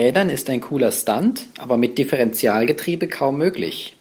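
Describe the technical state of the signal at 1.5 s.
At 1.5 s the speech is intact, with no fault to be heard, only the light trace of the hybrid Opus voice coding at 24 kbps that runs through the clip.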